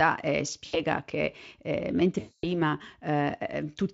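VoIP packet loss concealed by the speech codec occurs at 0.65 to 0.81 s, just before "che eh", and again from 2.19 to 2.60 s, right after "che eh". The decoder stretches its last pitch and filter across gaps of roughly 80 ms and 240 ms, which fits four and twelve 20 ms frames. The sound turns into a buzzy tone or a coloured noise that fades, and the voice stays weak or distorted for a while after each gap.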